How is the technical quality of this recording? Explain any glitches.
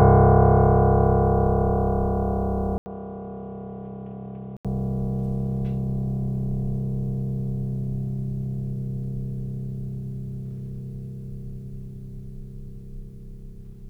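One glitch stands out in the music. From 2.78 to 4.65 s, after an 80 ms gap, it goes dull and about 10 dB quieter, with nothing above 3.8 kHz and faint new background noise, most likely the input switched to a poorer device.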